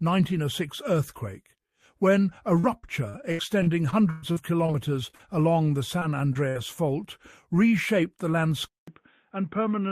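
From 2.59 s to 4.70 s the audio shows repeated packet loss, giving a robotic sound. Holes arrive one after another across the span, the longest about 118 ms. Each is patched by extending the last sound before the next hole hits, so roughly a fifth of this stretch is synthetic fill. The result is choppy, robotic audio with pieces missing, because the concealment never gets long enough to recover before the next loss.

Short concealed packet loss follows in four places: 5.10 to 5.21 s, where two holes of about 20 ms and 40 ms run back to back, then 5.99 to 6.03 s and 6.33 to 6.37 s. Each time a few hundredths of a second failed to reach the decoder in time. The receiver continued the preceding sound and then blended back into the real signal. These are heard as brief smears or wobbles rather than clear dropouts.

At 6.49 to 6.57 s comes a burst of packet loss, with about 60 ms missing in one run. 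The receiver held the last sound and faded it as the gap went on, so the hole becomes a short held buzz or fading hiss. Playback then resumes further along, and the material in between is gone.

At 8.68 s the audio drops out for about 0.19 s and returns duller, which points to the input being switched to a poorer device. Nothing above 3.8 kHz survives after the switch, giving a narrowband, boxy tone. The level also sits about 5 dB lower, and a new, faint background noise appears well below the signal. The likely cause is a change to a different microphone or a headset call profile, and the degraded sound continues to the end of the clip.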